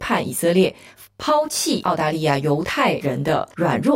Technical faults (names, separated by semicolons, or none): channel delay (comb filtering)